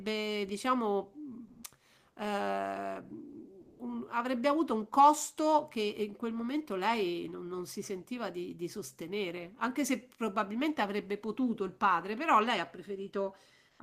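At 1.47 s the background gives way to comfort noise in place of the background, lasting 160 ms until 1.63 s. The real room sound sits about 45 dB below the loudest speech. Here it is swapped for a steady, featureless hiss, and the level shifts by about 13 dB. The likely cause is discontinuous transmission, as in Opus DTX. The sender stops during the pause, and the receiver fills it with synthetic noise.

At 3.61 s comes sound dropped by the voice detector, lasting 180 ms until 3.79 s. About 80 ms of real sound is lost. Steady noise or near silence stands in for it until the detector triggers again. The sender's voice detector likely took this sound for background and stopped sending.

At 13.69 s comes a second stretch of comfort noise in place of the background, lasting 100 ms until 13.79 s. Here the background is about 41 dB below the loudest speech. The level barely changes, but the texture flattens into plain, even noise.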